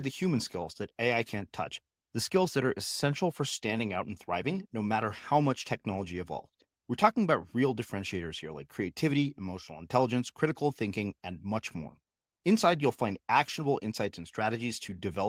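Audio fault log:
No audible faults found in this speech recording.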